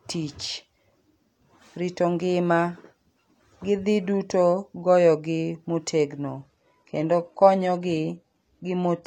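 At 6.37 s, right after "dhi duto goyogi motegno", the speech drops abruptly to a lower quality with no gap, and stays there until the end at 9.07 s. This is an adaptive stream at a lower bitrate. The player has switched to a leaner encoding, and the sound points to a move from AAC-LC at 96 kbit/s to HE-AAC at 20 kbit/s. The treble drops, content above 14.9 kHz is gone, and codec artefacts rise.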